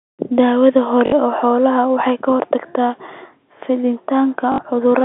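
At 1.06 s and again at 4.52 s the speech breaks into a short robotic stutter lasting 60 ms, with a brief buzz near 50 Hz. This is packet loss with the last packet repeated: the receiver filled each gap by replaying the final good packet until new ones arrived, which fits three 20 ms packets. The repeats ignore the pitch cycle. The telephone band of G.711 coding stays audible throughout.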